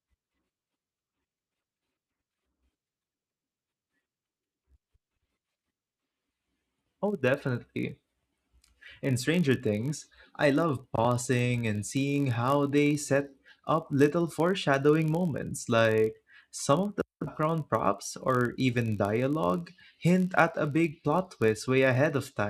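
Speech with a block size mismatch (padded) throughout: a steady 46.9 Hz buzz, fitting 1024-sample reads with slightly shorter writes zero-filled, and a barely slower pace.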